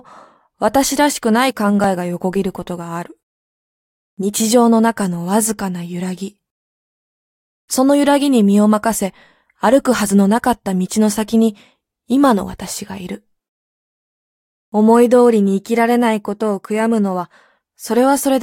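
At 1.84 s a repeated buffer appears: a 1.33 ms block, which fits a 64-sample buffer, replays twice when fresh audio arrives late, producing a click or brief buzz.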